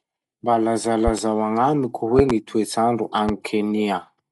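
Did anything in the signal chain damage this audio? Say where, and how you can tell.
Yes. In the codec stage, the audio is dull, with nothing above 11.5 kHz and rough fluttering noise around tones. That likely comes from Dolby Digital compression at a low bitrate, consistent with a 64 kbps encode.

In the analogue wiring or switching, loud pops sit well above the speech, which continues underneath. There are double pops at 1.07–1.21 s and 2.19–2.33 s and a single one at 3.29–3.32 s, likely voltage steps from a switch or connector.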